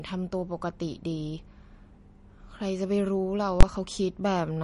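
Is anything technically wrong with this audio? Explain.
Yes, there are two problems in this speech clip.

Throughout, the sound is watery and swirly, and consonant attacks smear. Nothing is present above 10.6 kHz. This is likely MP3 compression at a low bitrate, roughly 40 kbps. Short of bits, the encoder cuts all treble at a fixed frequency. It also discards weaker frequency lines, and these flicker in and out between frames. That flicker gives the swirl. The damage is plainly audible, especially on s sounds.

From 3.61 to 3.63 s there is a single loud bang. This comes from invalid numbers at full scale. A calculation produced infinite or invalid values, and these were clamped to the maximum output level. The whole block, about 21 ms, sits flat at one extreme value, far beyond the speech peaks, which fits a 1024-sample block. The block is so short that its two edges merge into one sharp crack. 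The audio is lost for that stretch.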